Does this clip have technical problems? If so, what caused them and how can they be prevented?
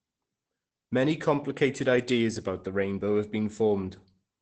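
Yes. Heavy Opus compression, likely in its speech mode at a bitrate near 12 kbps, removes everything above 8.6 kHz throughout, leaving the speech muffled and hoarse. Encoding at a higher bitrate would prevent this.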